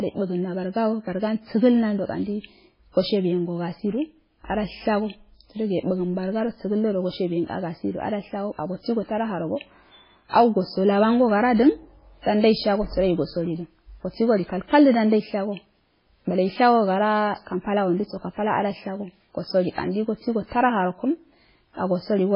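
Right from the start the speech has that watery, swirly quality, and nothing comes through above 5.3 kHz, so sibilants sound dull and chirpy. That's likely heavy MP3 compression, with a very low bitrate along the lines of 16 kbps starving the encoder so it drops the treble and flickers weak detail on and off.

Then there's pre-echo at 10.29 to 10.33 s, 12.22 to 12.26 s and 19.75 to 19.78 s. Each time, a short hiss lasting about 34 to 43 ms creeps in just before a sharp onset. The codec smeared its noise across the block, so it leaks ahead of the attack and softens it.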